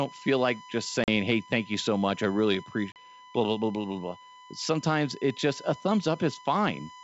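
Speech over a wideband call carries a steady USB whine throughout, a fixed 1 kHz tone sitting roughly 20 dB below the speech. That pitch matches the 1 ms frame rhythm of a USB bus whose current draw is leaking into the audio path through shared power or ground, so the tone stays put regardless of what is being said. The sound is otherwise coded as G.722, clean up to about 7 kHz. Two episodes of packet loss on an ADPCM call also occur, at 1.04 to 1.09 s, between "feel like just" and "hey thank you so", and at 2.92 to 2.98 s, between "so much I really" and "blah blah blah blah". Each is an abrupt 40 ms gap, consistent with about two packets going missing. Because ADPCM decodes each sample from the running state of the previous ones, the receiver's predictor and step size no longer match the sender's after the gap. The speech therefore comes back with brief, slight distortion before settling within some tens of milliseconds.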